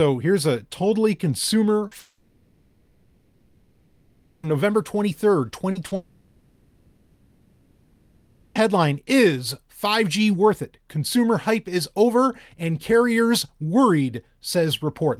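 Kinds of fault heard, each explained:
Short concealed packet loss: at 1.87, 5.71 and 5.87 s, about 40 ms of speech arrived too late to decode, so the receiver extended the preceding sound across each gap and blended back in, leaving a quick smear or wobble, the first right after "here's a totally consumer".
Long network dropout: from 1.99 to 4.46 s and from 5.95 to 8.58 s, the speech breaks off for roughly two and a half seconds each time, likely because packets stopped arriving. Synthetic fill covers the whole gap with no true silence, and speech resumes with that stretch missing.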